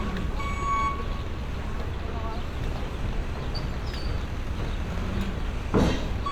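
No technical faults can be heard in this recording.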